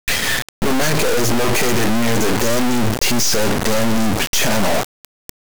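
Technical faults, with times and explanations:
Throughout, integer read as float: the speech is replaced by a brutally loud, buzzy square-wave racket that slams between silence and hard clipping, dropping out in the quietest stretches. That fits 32-bit integer samples being decoded as 32-bit floats. The integer bit patterns become float values that are either tiny, near zero, or huge and invalid, so nearly every sample lands at zero or gets pinned at the clipping limit, and you hear that as a harsh on-off buzz.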